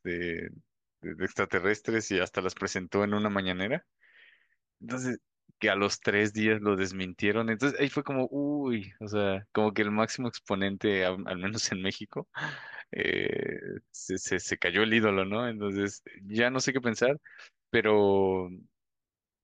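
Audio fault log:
No faults can be heard anywhere in the speech. There is nothing to log for this clip.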